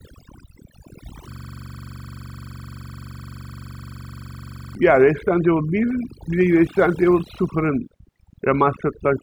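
Across the whole recording, overdone noise removal has pushed bands near the noise estimate to nothing, leaving twinkling specks in near silence and a patchy, holed spectrogram. From 1.32 to 4.75 s, a system hang loop repeats one 42.67 ms buffer about 80 times, which fits a 2048-sample buffer. The result is a rough buzz at 23.4 Hz, and the waveform shows identical tiled blocks.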